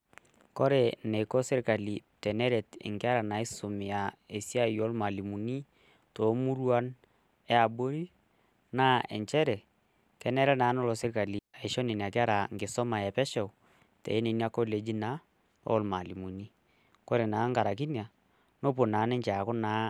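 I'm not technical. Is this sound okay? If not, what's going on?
No. At 11.39 s, right after "nelo serkali", the speech vanishes into near silence for about 0.15 s, returning at 11.54 s before "aisho nena kera nkisuma". That's a digital wireless dropout: the radio link lost data and the receiver muted cleanly, with no hiss or crackle around it.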